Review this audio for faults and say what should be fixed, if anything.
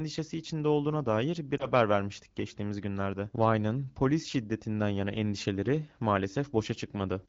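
Lost AMR speech frames at 1.57 to 1.68 s cause a brief warble and dip, consistent with one lost frame, as the AMR-WB decoder reuses prior pitch and vocal-tract settings with fading gain. A hard dropout would cut to silence instead. Improving radio link quality or error protection would prevent it.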